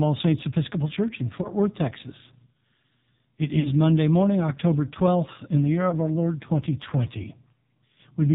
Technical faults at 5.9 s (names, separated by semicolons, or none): AMR narrowband mobile codec; lost AMR speech frames